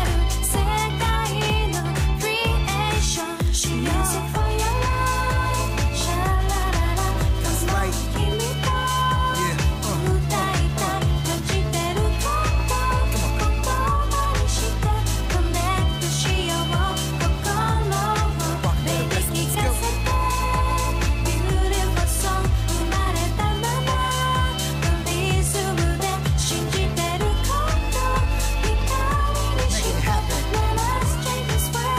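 Nothing is technically wrong with this audio.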